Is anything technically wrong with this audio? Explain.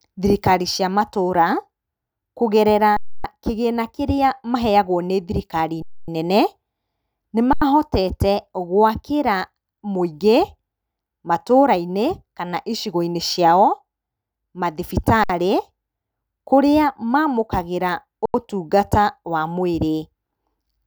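Yes. Underrun with held sample at 2.97 s (about 0.28 s), 5.82 s (0.26 s), 7.53 s, 15.24 s (0.06 s) and 18.26 s (0.09 s each for 7.53 s and 18.26 s, which fits a 4096-sample buffer). Each time, the output buffer emptied and the converter held its last value, so the speech freezes into a flat, clickless pause, then resumes gently where it stopped with essentially nothing lost.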